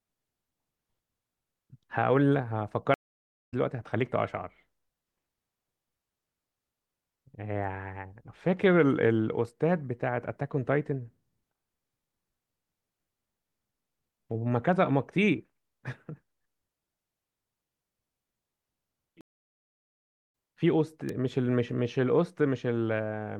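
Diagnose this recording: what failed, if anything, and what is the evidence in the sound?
Two things went wrong here. The first is a stream reconnect, which is a network-stage fault, and it happens twice. At 2.94 s the audio drops out for about 0.57 s and comes back at 3.54 s roughly 0.4 s further along. At 19.21 s there's a longer gap, about 1.1 s, ending at 20.32 s and skipping ahead by roughly 0.7 s. Each time the link broke, the player spun up a fresh decoder mid-stream, and that first frame eases in rather than snapping back.

The other is an electrical switching spike at 21.09 s, a sharp snap sitting on top of the speech and lasting just a few milliseconds. That points to the analogue wiring. It's likely a nearby switch, motor or static discharge throwing a brief arc that the audio line picked up. It's a one-off click, not part of the stream dropouts.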